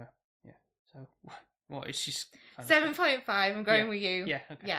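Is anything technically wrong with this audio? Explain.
Yes. From 0.0 to 1.16 s the speech has channel delay (comb filtering): one channel lags by well under a millisecond, so the mono sum cancels at evenly spaced frequencies from around 3 kHz upward. It sounds hollow and phasey; unlike a phaser, the notches stay fixed.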